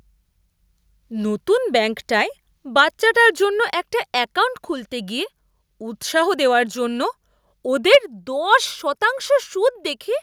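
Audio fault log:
7.93 to 7.97 s, microphone overload: a brief harsh, crackling edge lands on a loud peak in the speech, with the waveform tops flattened for roughly a tenth of the samples in that span and the signal pushed about 4 dB past the converter's limit. The likely cause is an input volume set too high, so the peak exceeded the converter's ceiling and was squared off, which adds the gritty distortion heard on that moment.
7.95 s, microphone volume stepped down: right in the middle of that distorted peak, the speech and the background together drop by about 3 dB in a single abrupt step rather than a smooth fade. This is likely the call software reacting to the overload by reducing the device input volume at once. Everything after this point therefore sits lower than before.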